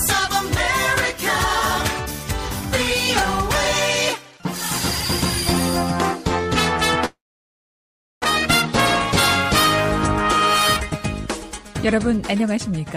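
At 7.05 s the sound breaks off and does not return until 8.26 s. For about 1.2 s the last sound is carried on as a fading buzz, with only near-silence for most of the gap. When the audio resumes, roughly a second of material is simply gone rather than delayed. This is most likely a long network dropout. Unlike a brief packet loss, the concealment gives up and goes quiet.

From 10.90 to 12.44 s the audio runs at about 109% speed while its pitch stays put. This is a jitter buffer speed-up: after the dropout the receiver held extra delay, around 150 ms, and shed it by cutting out many short pitch-period slices in a row. Because pitch is unchanged, it sounds hurried rather than higher, which separates it from a sample-rate mismatch.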